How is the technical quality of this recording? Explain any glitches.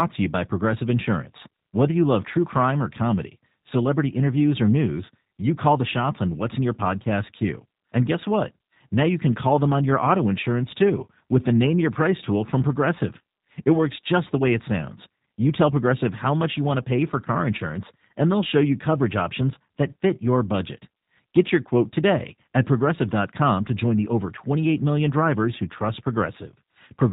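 The technical quality is limited by one fault that runs through the entire speech recording: G.729 codec compression. The speech was squeezed through a low-rate telephony coder, and the damage is plainly audible. Its character fits the 8 kbit/s G.729 family, most likely the lighter G.729A variant. The coder models each stretch of speech as a vocal tract filter fed by a pitch predictor and a handful of pulses, rather than keeping the waveform, and it discards everything above 4 kHz. As a result the voice sounds muffled and narrowband, with a slightly rough, buzzy, synthetic edge, because it is rebuilt from a coarse model rather than reproduced.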